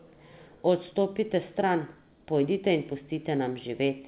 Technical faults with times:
none

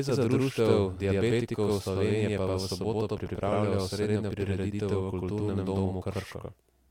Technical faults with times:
0.00-6.90 channel delay (doubling)

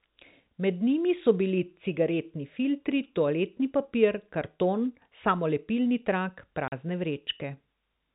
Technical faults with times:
6.68-6.72 packet loss filled with silence

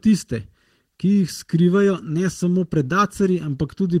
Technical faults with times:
0.00-4.00 channel delay (comb filtering)
0.00-4.00 clock drift between sender and receiver
0.83-3.88 repeated timing corrections

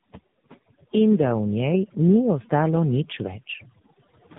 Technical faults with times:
0.00-4.38 overdone noise removal
0.00-4.38 tandem speech coding

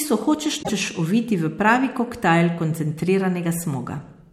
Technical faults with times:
0.59-0.70 damaged data in a compressed stream

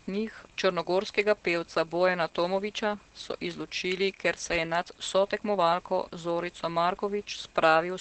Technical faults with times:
0.00-8.01 Opus voice compression

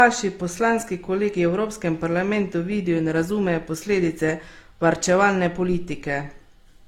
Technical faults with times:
0.00-6.87 transcoding between lossy codecs

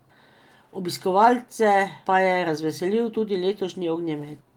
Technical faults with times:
none

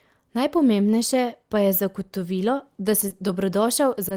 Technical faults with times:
3.08-3.12 short concealed packet loss
4.08-4.12 short stall from a late packet

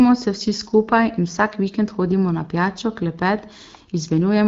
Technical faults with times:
none

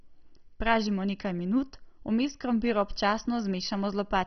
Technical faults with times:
0.00-4.27 MP2 compression

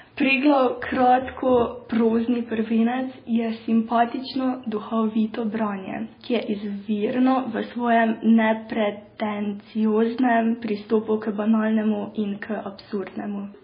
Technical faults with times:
0.00-13.63 MP3 compression

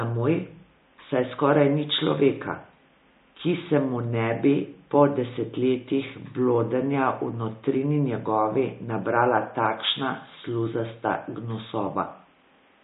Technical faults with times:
0.00-12.83 MP3 compression

